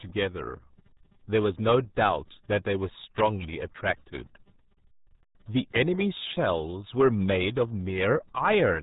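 Speech runs through the RealAudio 14.4 codec for the whole clip, with nothing above 3.8 kHz and heavy gargling, muffled smearing that fits an 8 kbit/s dial-up speech codec. A plain low-pass or telephone band would sound dull but clean, without this watery warble.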